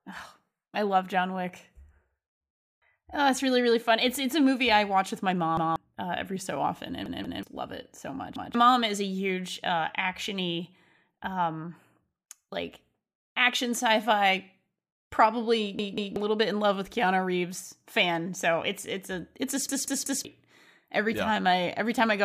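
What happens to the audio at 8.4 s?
At 8.36 s the playback device ran short of fresh audio and fell back on a repeated buffer, playing its last block of about 186 ms once more, which fits an 8192-sample buffer. From 8.36 to 8.55 s the same fragment of speech is heard twice in a row, with a hard join where the repeat begins. The result is a short stutter, and about a fifth of a second of the real speech never arrives.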